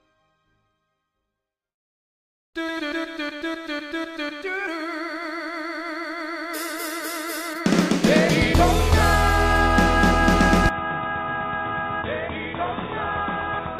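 At 10.69 s the sound abruptly goes dull and boxy, with nothing above 3.8 kHz, drops noticeably in level and picks up a faint new noise floor, with no gap at the change. That's likely the input switched to a poorer device, which stays for the rest.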